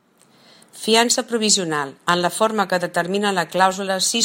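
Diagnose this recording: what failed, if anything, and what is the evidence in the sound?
Nothing stood out on listening to this speech recording, and no stage of the chain shows any sign of having failed.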